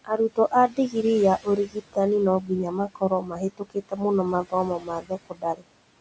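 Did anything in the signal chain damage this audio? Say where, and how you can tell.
Yes. Call-processing noise suppressor artifacts: the suppressor pulls the room noise down by about 19 dB throughout, leaving the residual noise pumping under the speech.

Speech cut by the noise suppressor occurs at 0.05–0.52, 0.68–0.95, 1.43–1.97, 2.88–4.0, 4.79–5.12 and 5.29–5.63 s. Parts of the speech mistaken for noise drop by about 12 to 19 dB and sound swallowed.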